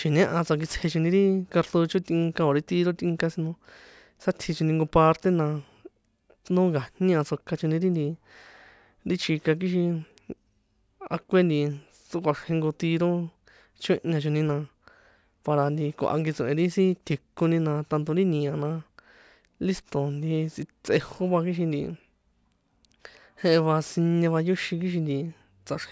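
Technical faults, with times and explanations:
Throughout, aliasing: sound above 8 kHz folds back as false pitches, fitting an unfiltered drop to a 16 kHz rate. Sibilants turn gritty.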